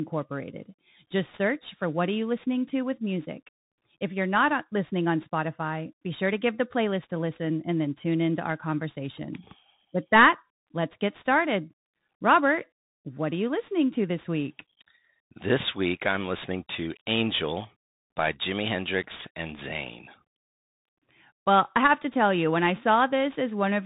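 Speech runs the whole way through with two problems stacked on it. There's sample clock jitter throughout: the converter clock wobbles by something like 7 microseconds, so samples land slightly early or late. On steep, loud or bright passages that timing error turns into a roughness sitting roughly 20 dB under the signal, and it drops away when things go quiet. On top of that it sounds like a Bluetooth CVSD headset codec, plainly audible. Nothing gets through above about 3.8 kHz, sibilants come out scratchy, and a grainy hiss runs underneath. That matches one-bit up/down coding at around 64 kbps, where the adaptive step can't keep up with loud high-frequency content.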